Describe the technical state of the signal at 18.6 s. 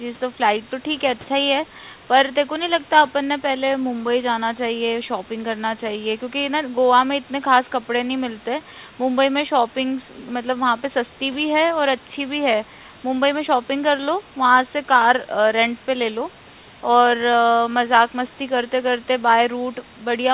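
At 18.6 s the audio is intact, with no fault present: the speech carries the narrowband sound of the G.711 A-law call path with nothing above 4 kHz, and faint room noise sits about 35 dB below the speech.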